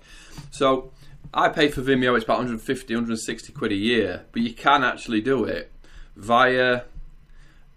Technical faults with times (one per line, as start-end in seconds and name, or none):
none